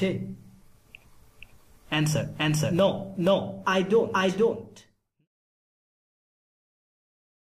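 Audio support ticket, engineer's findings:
Doubled audio track, whole clip: every event repeats about half a second later at roughly equal level, full-band, no decay or room colour, so not echo or reverb. Likely a second, slower capture path or out-of-step edit copy; the editor's fade-out runs from about 4 s to 5.28 s.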